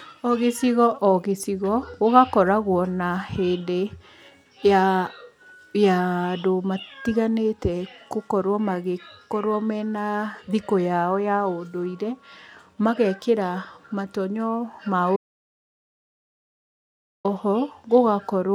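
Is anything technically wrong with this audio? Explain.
Yes, there's one clear problem. From 15.16 s to 17.25 s the speech hits an audio dropout to silence, losing about 2.08 s. It cuts off mid-flow and comes back just as abruptly, and the gap is silent with no room tone at all. That points to the input going away, likely a device or link dropping out or a momentary mute, while the recorder kept writing silence. Whatever was said in that stretch is simply gone.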